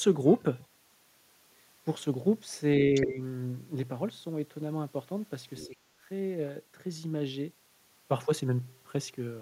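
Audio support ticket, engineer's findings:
Other side's voice leaking through, 2.95–3.06 s and 5.57–5.68 s: brief scraps of a second voice, about 10 dB then about 20 dB under the talker. Likely the echo canceller missing part of the loudspeaker signal.

Speech suppressed in double talk, 3.05–3.22 s and 5.68–5.76 s: the talker dips by about 10 dB for around 150 ms, then about 5 dB for around 70 ms. Likely the echo canceller ducking both sides during overlap.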